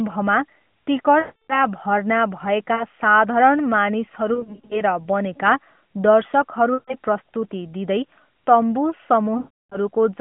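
Speech over an AMR narrowband mobile link, with lost AMR speech frames at 1.2–1.59, 2.74–2.84, 4.34–4.81, 6.74–6.95 (before "प्रस्तुति दिँदै") and 9.38–9.78 s. The decoder stretches the last good frame while fading it, producing warbles and dropouts. Each time, the voice returns weak or rough for a moment.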